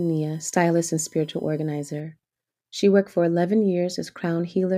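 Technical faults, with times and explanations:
0.0–2.0 s, USB whine: a faint, steady tone at 1 kHz and its multiples, strongest near 17 kHz. The bus draws current in 1 ms frames, and this leaks into the audio.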